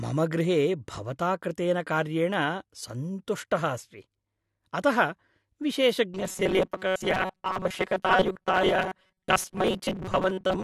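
From 6.14 s to the end of this speech clip, the voice collapses into a rigid, metallic buzz pitched at 188 Hz that only loosely tracks the words, the classic robotic sound from repeated short buffers. The likely cause is audio arriving too slowly, so the playback fills the gaps by looping its last fragment; the 188 Hz drone fits a repeat of roughly 5.3 ms, and about half of what is heard is repetition rather than new audio.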